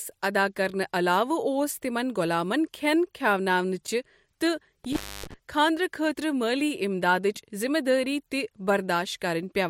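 At 4.85 s, just after "غۄلامن کھٮ۪ن کھِٮ۪اناونٕچ تہٕ", an intermittent contact fault lasts until 5.34 s. A loose connection breaks the signal path for about 270 ms, so the speech drops out to faint hiss, bracketed by crackle as the contact opens and recloses.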